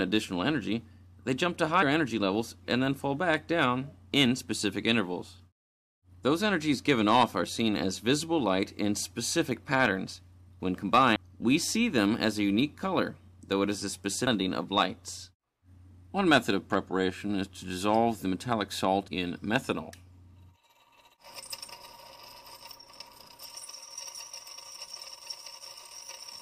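Brief bursts of damaged data in a compressed stream occur at 11.15 s, 14.26 s, and from 19.07 to 19.09 s. Corrupted frames throw the decoder out of sync, producing a chirp, squawk, click or short hole.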